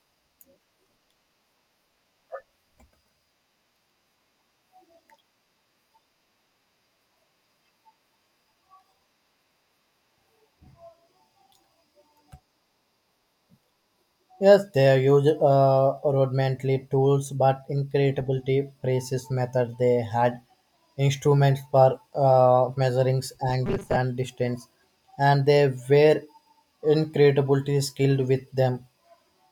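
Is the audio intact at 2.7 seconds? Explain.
Yes, the speech at 2.7 seconds plays through cleanly, with no dropout, click, distortion or other fault at that moment.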